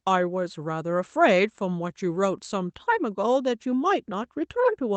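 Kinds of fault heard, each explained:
Nothing in this speech recording stood out as a fault on listening, with only the ordinary character of a call connection audible.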